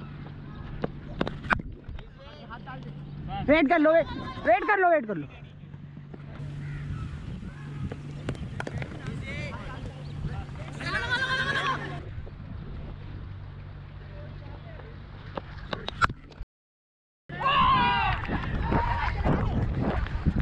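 An audio dropout to silence runs from 16.43 to 17.29 s, losing 0.86 s, likely a lost input link; waveform flatlines, spectrogram shows a blank full-band gap.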